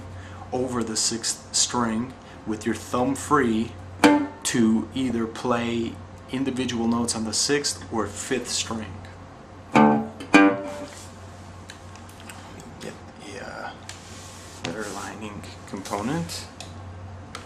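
At 5.06 to 5.25 s and again at 16.36 to 16.49 s, DAB burbling puts short blips of noise in single sub-bands of the sound. Residual bit errors of a fraction of a percent corrupt MP2 sub-band levels frame by frame. Unlike a dropout, the audio never goes silent or repeats; isolated bands blip instead.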